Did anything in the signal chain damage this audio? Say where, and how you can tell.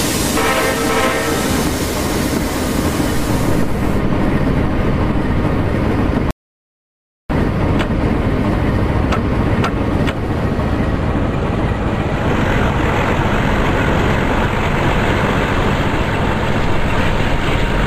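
Yes, there's an audio dropout to silence from 6.31 to 7.30 s, so just under a second gone. The sound stops mid-flow into silence with no room tone, then resumes. Most likely the input link or device dropped while the recorder kept writing silence.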